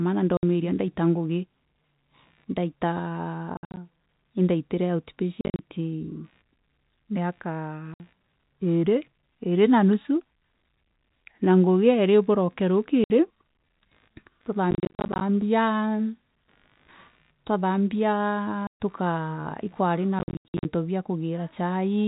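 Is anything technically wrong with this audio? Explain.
Yes. This speech has two faults. First, packet loss filled with silence at 0.37–0.43 s (just before "ndaita ngugi"), 3.57–3.77, 5.41–5.59, 7.94–8.00, 13.04–13.10 (after "na ngugi iiri buroke"), 14.71–15.21, 18.67–18.79 and 20.19–20.65 s. Lost packets were replaced with digital silence rather than concealed. The holes, 60 or 130 ms solid or scattered runs up to 80 ms, fit 10 ms packets. The hard edges separate this from a fade or a codec dropout.

Second, computer activity noise runs underneath throughout. It is a faint buzz, far below the speech, pulsing at roughly 70 Hz. Processor or peripheral load is shifting the shared audio ground. Unlike steady mains hum, it rises and falls with the machine's activity, not with the speech. The telephone-band G.711 coding limits the sound to below 4 kHz, as it should.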